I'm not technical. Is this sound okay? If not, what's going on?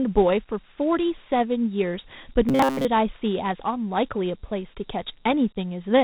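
No. The whole clip is speech stored as Dialogic VOX ADPCM, a phone-system format. It sounds dull above about 4 kHz and carries a gritty hiss.

From 2.49 to 2.85 s the speech turns robotic, with a steady metallic buzz near 134 Hz. This is likely robotic sound from repeated short buffers: tiny slices replayed instead of fresh audio.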